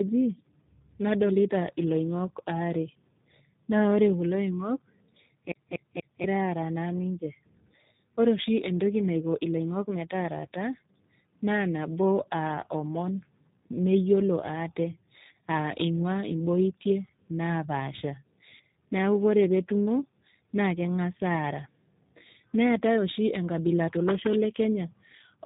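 Throughout the clip, tandem speech coding: the call passed through two separate speech codecs in series, with a plain G.711 link between them, so the audio was decoded and re-encoded at each border. The second coder compressed what the first had already degraded, and the harm compounds. The speech comes out rough, muffled and warbly, with nothing above 3.8 kHz. The final warble fits G.729A at 8 kbit/s stacked on an earlier G.726 stage at 32 kbit/s.

From 5.52 to 6.24 s the CD is stuck on one turn: a scratch makes the laser jump back a track at the same point on each rotation, so a 0.24 s slice of audio plays again three times, with a brief mute at every jump. It is heard as a quick, evenly spaced stutter, the mechanical repeat of a skipping disc, before playback moves on.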